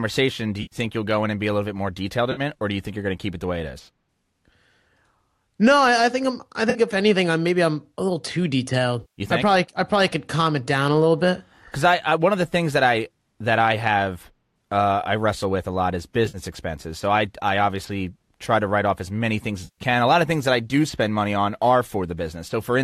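Speech with AAC frame loss and concealment at 0.62–0.76, 2.32–2.41, 6.70–6.79, 9.01–9.21, 16.26–16.38 and 19.64–19.82 s: smeared, phasey patches where the decoder repeats the last spectrum, seen as blurred, flattened spectrogram columns and waveform dips.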